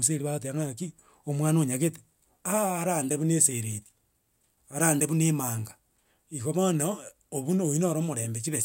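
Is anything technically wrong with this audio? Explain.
No, nothing in this speech recording reveals a technical fault.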